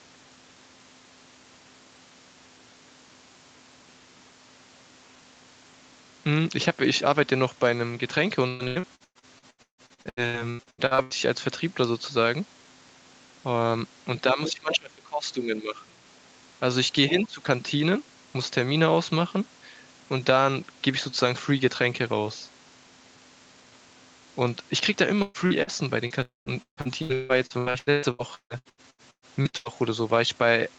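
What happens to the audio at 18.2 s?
At 18.2 s the speech carries on intact, with no dropout, glitch or other fault, just the steady band-limited sound of a call path that carries nothing above 8 kHz.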